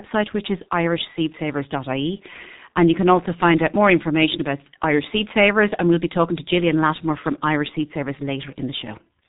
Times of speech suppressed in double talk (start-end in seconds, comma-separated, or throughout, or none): none